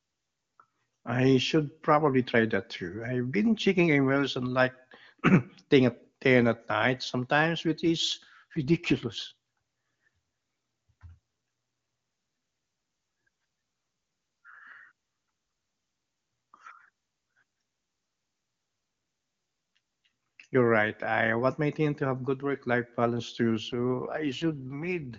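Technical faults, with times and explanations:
7.97–9.18 s and 23.71–25.18 s, AMR rate drop: the speech turns rough, buzzy and synthetic, yet stays just as wide-band with no gap. The clear HD Voice coder is being pushed down, which fits a switch from 23.85 to 8.85 kbit/s, trading speech detail for error protection.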